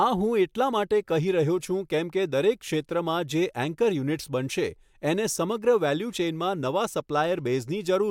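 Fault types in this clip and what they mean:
No fault types are present in this clip.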